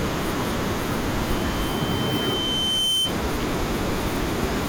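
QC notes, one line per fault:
1.28–3.18 s, loudspeaker feedback squeal: a single steady tone at 3.1 kHz swells over roughly one and a half seconds until it sits a few decibels above the speech, then stops. The microphone is picking up its own loudspeaker, and at that one frequency the loop gain passes unity, so the tone feeds itself. Unlike a fixed interfering whistle or hum, it rises by itself from nothing rather than starting at full level.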